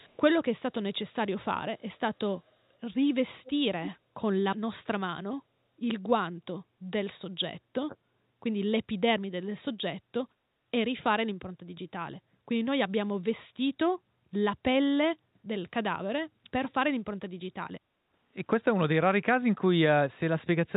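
Echo leak at 0.0 to 0.17 s and 3.44 to 3.52 s: a delayed copy of the speech trails by 240 ms, about 35 dB down, then about 20 dB down. It is likely loudspeaker sound the far end's echo canceller failed to remove.

Speech suppressed in double talk at 7.46 to 7.52 s and 7.87 to 7.96 s: the speech briefly dips, deeply and then more shallowly. The likely cause is the canceller mistaking overlapping talk for echo and attenuating it.

Background gated by the echo canceller at 17.89 to 18.11 s: room sound drops about 9 dB for roughly a fifth of a second. The canceller clamps the microphone while its loudspeaker plays, then releases it.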